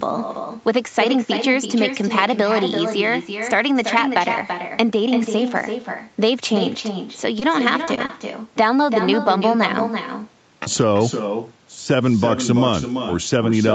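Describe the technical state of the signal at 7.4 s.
At 7.39 to 7.43 s there is a short concealed packet loss. About 20 ms of audio never reached the decoder in time, so the receiver extrapolated the preceding sound across the gap and cross-faded back into real audio. The result is a brief smear or wobble.

Across this moment, as throughout, there is echo with no canceller. The far end's loudspeaker output is recaptured by its microphone and returned uncancelled, roughly 300 ms late and about 7 dB below the direct sound, giving a thinner shadow that trails the signal.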